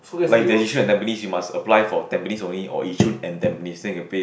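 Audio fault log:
No faults heard anywhere in this speech recording.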